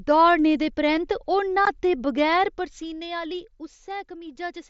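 A short speech recording, carried over a wideband mSBC Bluetooth headset link with speech band-limited to 8 kHz, has one instance of unconcealed Bluetooth headset packet loss at 1.65 s, right after "दौड़ने दे परैंत्त ओह्". A 15 ms gap, consistent with two lost headset frames, leaves an abrupt hole. On the waveform it appears as a flat notch, and the spectrogram shows a thin vertical gap.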